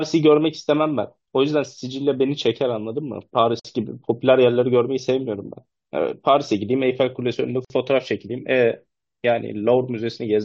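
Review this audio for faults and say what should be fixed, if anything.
Two gaps at a join of encoded pieces cut the speech, at 3.60–3.65 s (52 ms) and 7.65–7.70 s (53 ms), four seconds apart. Each separately encoded piece keeps its leading encoder delay and padded final frame. The waveform drops to a flat line with smeared edges, shown as a narrow blank column across all frequencies on a spectrogram. To prevent it, trim encoder delay and padding (or encode gaplessly) before joining the pieces.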